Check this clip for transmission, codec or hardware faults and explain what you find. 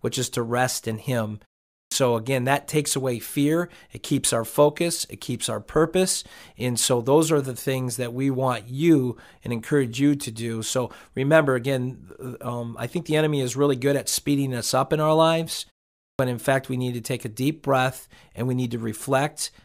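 There is one fault, clipped start after a pause, occurring twice. The output device drops into sleep during short silences and needs time to wake or relock. After a pause, the first sound of the next phrase is swallowed. At 1.75 s, after a 0.37 s pause, about 165 ms is lost before "again that takes away". At 16.04 s, after "up in our lives" and a 0.41 s pause, about 151 ms goes before "in fact we need". Both phrases jump in abruptly, without their opening sounds.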